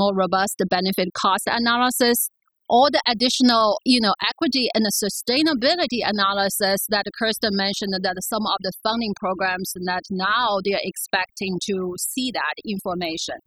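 Throughout the speech, overdone noise removal is audible. Bands near the noise floor were cut too hard. The background drops to twinkling near-silence.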